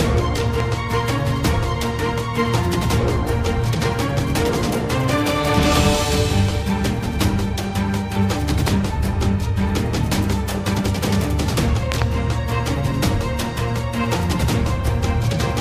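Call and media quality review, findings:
Loud pop: sharp pops well above the sound, which continues underneath, at 0.60–0.62 s and 8.68–8.70 s, peaking about 15 dB over it; a double pop at 11.92–12.04 s, about 20 dB over. Likely voltage transients from a plug, switch, static or driver glitch, shaped downstream.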